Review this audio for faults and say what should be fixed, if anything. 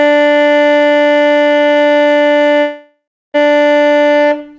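At 2.60 s the music breaks off into a smeared, buzzy continuation of the last sound that fades out, leaving about 0.3 s of silence before it resumes at 3.36 s with roughly 0.74 s simply gone. That's the signature of a long network dropout, likely packets lost on the G.722 call path, which also leaves nothing above 8 kHz. Worth fixing by stabilising the network link or adding redundancy/FEC so bursts of loss get recovered.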